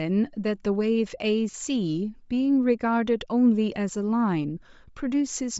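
Right from the start, the speech has a breathy, grainy edge, and the top end sounds thin and hissy instead of crisp. That's the signature of Bluetooth LC3 compression, the likely cause here. At a low rate, which fits something around 32 kbps, the encoder discards much of the upper spectrum and fills the gaps with shaped noise. The damage is plainly audible all the way through, and the texture points to 10 ms frames.

At 1.51 s there's a brief glitch lasting until 1.54 s. It's a short, smeared, noisy blip instead of a clean dropout, and that's what lost LE Audio frames sound like. The decoder covers the 30 ms gap, which fits about three 10 ms frames, by replaying the last good spectrum with scrambled phases. The audio doesn't go silent; it turns into a brief wash of noisy smear.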